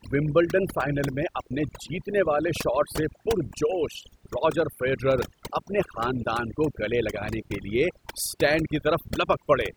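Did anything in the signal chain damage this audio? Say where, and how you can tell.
Yes: overdone noise removal throughout this speech, at the call-processing stage. Bands near the noise estimate are cut away, leaving twinkling specks in near-silent gaps and taking quiet parts of the voice with them.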